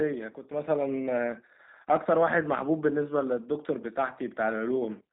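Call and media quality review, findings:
G.729 codec damage, whole clip: rough, synthetic speech; spectrogram blank above 4 kHz. Sparse pulse excitation through a vocal tract filter, consistent with 8 kbit/s G.729A.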